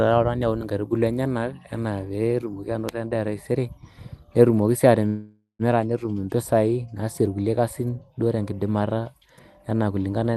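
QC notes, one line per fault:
5.07–5.62 s call audio freeze: sound smears into a decaying buzz, then 130 ms of silence, resuming intact 0.52 s late; likely a jitter buffer underrun.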